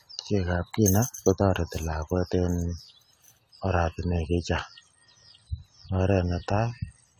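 Throughout the speech, the sound is swirly, smeared and hollow, with blurred attacks and nothing above 19.4 kHz. This is generation loss, likely from around ten lossy re-encodes consistent with AAC-LC at 96 kbit/s. Each pass adds quantisation noise on a shifted frame grid.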